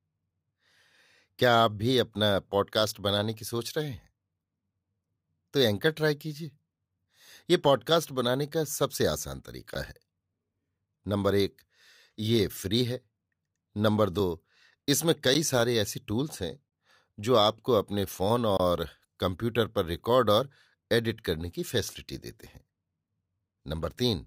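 Blocks of digital silence interrupt the speech at 9.74 s, 14.20 s, 15.34 s, 16.69–16.72 s and 18.57–18.60 s. Output buffers likely went unfilled, and the 11.6 ms gaps fit a 512-sample buffer. Each cut is hard: the shortest ticks, the longer ones open brief holes.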